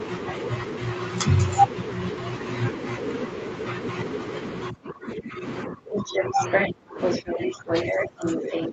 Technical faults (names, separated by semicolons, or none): speech suppressed in double talk; other side's voice leaking through